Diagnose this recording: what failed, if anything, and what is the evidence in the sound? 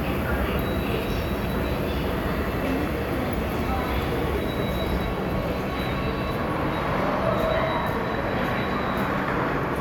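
Nothing failed: no stage in the chain, from wiring and conversion through to playback, leaves any audible mark on these sounds.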